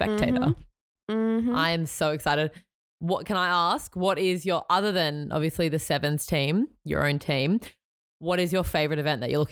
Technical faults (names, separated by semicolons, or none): none